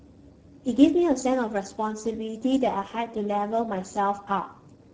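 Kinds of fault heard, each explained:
Speex codec: Speex is an older CELP speech codec from VoIP and game chat. Here the damage is plainly audible throughout the speech. Too few bits reach the excitation, so speech sounds noisy and hoarse. This points to a low-quality setting near 10 kbps.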